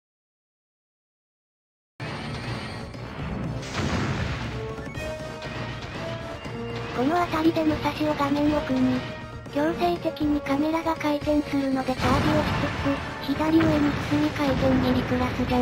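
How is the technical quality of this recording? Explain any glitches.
The recording has one clear fault at the very beginning. A cut-off start runs from 0.0 to 2.00 s: the capture began late, so the first two seconds are digital silence. At 2.00 s the sound appears abruptly, already in progress, because whatever came before it was never recorded. There is no natural attack or fade-in. Instead, the audio jumps from complete silence straight to full level partway through a sound.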